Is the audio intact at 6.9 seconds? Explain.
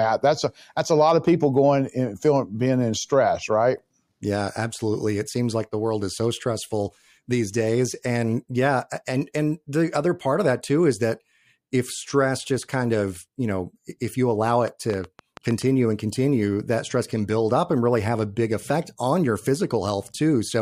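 Yes, the speech at 6.9 seconds is intact, with no dropout, click, distortion or other fault at that moment.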